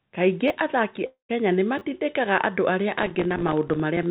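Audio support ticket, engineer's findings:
Repeated buffer, 0.48–0.50 s and 1.79–1.81 s: short stutter/buzz in the speech. Output device replayed last buffer twice when new audio arrived late; fits a 10 ms buffer, about 20 ms lost each time. Waveform: identical 10 ms slices back to back, hard joins. Spectrogram: thin vertical lines at each seam.

Long network dropout, 1.06–1.31 s: speech dissolves into a fading buzz, then silence about 0.11 s, resuming with roughly 0.24 s of audio missing. Likely jitter-buffer starvation on the receive side, with concealment extending the last sound. Waveform: decaying envelope into flat line. Spectrogram: smeared harmonics fading to blank band.

Processor overload crackle, 3.03 s to end of clip: gritty tearing over the speech. Audio thread missing consecutive deadlines; fits buffers of a few ms, dozens dropped to silence. Waveform: rapid pin-hole gaps of silence. 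Spectrogram: dense broadband vertical striations. Band-limited to 4 kHz throughout, consistent with G.711 mu-law at 64 kbps on the call path.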